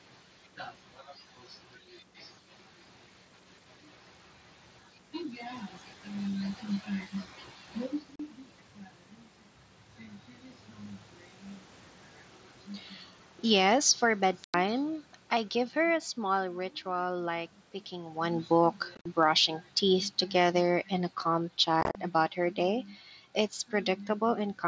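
At 8.16 s, unconcealed Bluetooth headset packet loss cuts a 37.5 ms hole in the speech. Nothing is concealed: silence or an idle pattern replaces the missing headset packets, so the waveform drops with abrupt edges, and the spectrogram shows a vertical gap across all bands up to 8 kHz. A longer gap follows at 14.44 to 14.54 s, about 97.5 ms lost.

Right after "small ritual like picking", from 18.31 to 22.91 s, automatic gain falling lowers the level by about 6 dB. The control judged the input too loud or its background noise too strong and eased its gain down, so speech and background sink together. The waveform envelope tapers steadily, and the spectrogram dims uniformly rather than losing particular bands.

Within that fade, the packet loss returns in scattered form. At 18.95 to 19.06 s, 75 ms goes missing across about 105 ms, with the longest run 45 ms. At 21.81 to 21.95 s, 90 ms is lost over about 135 ms, with a longest run of 37.5 ms. 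These sound like rough, chopped crackle. They appear as a comb of narrow vertical gaps, which fits losses of 7.5 ms headset frames.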